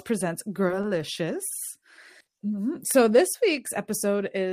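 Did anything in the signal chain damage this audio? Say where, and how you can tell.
Yes, there's a short stall from a late packet at the network stage, around 2.21 to 2.29 s. The speech hangs on one sound for about 50 ms with a faint buzz or dip. The jitter buffer ran dry, so the receiver stretched the last audio until the packet arrived. Nothing's lost, but everything after runs 50 ms later.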